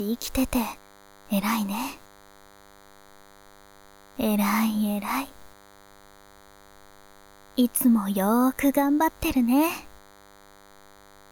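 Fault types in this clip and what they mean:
DECT cordless phone buzz: a nearby DECT handset or base pulsing every 10 ms gets rectified, leaving a thin 100 Hz buzz, rich in harmonics, running quietly under everything.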